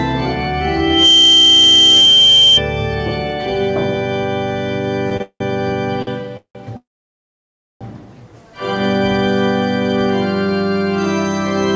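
From 0.79 to 2.62 s, loudspeaker feedback squeal: a loop gain above one makes a 3.1 kHz tone swell within about 0.3 s to roughly 10 dB above the sound. On a spectrogram it is a bright horizontal line.

At 5.17 s and 6.02 s, a short stall from a late packet: the jitter buffer ran dry, so the last sound is held for 30 ms and 47 ms, visible as a briefly smeared, repeated waveform segment. Nothing is lost.

Call audio freezes run from 5.22 to 5.42 s, 6.37 to 6.57 s, and 6.77 to 7.83 s, likely from packets delayed in transit. Each begins with a fading buzz or hiss, then goes flat for 70 ms, 80 ms, and nearly 1 s respectively. The spectrogram shows blank columns before the sound resumes where it stopped. Above 8 kHz the spectrogram is empty throughout, consistent with a G.722 call path.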